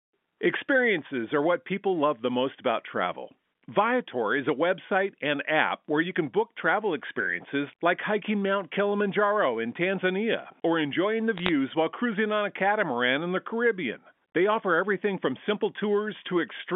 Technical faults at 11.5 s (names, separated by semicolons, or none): bit errors on a digital phone line